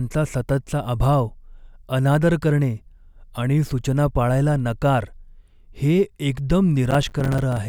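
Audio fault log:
6.91–7.57 s, processor overload crackle: a gritty burst of crackle tears through the speech near the end of the clip and stops at 7.57 s. The processor fell behind and missed buffer deadlines again and again. Each miss dropped in a short stretch of silence with hard edges on both sides, which fits buffers of around 5 ms. The density of clicks suggests something like twenty dropouts across the span, merging into continuous tearing.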